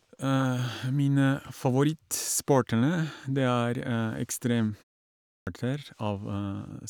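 Speech clip with a clipped start after a pause: following a 0.58 s gap, the output wakes late and swallows about 139 ms from 5.33 to 5.47 s, so the word begins abruptly.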